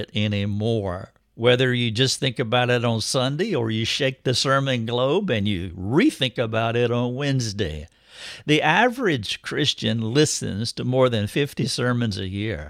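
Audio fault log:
No fault can be heard anywhere in this speech recording. Nothing in it calls for an entry in this log.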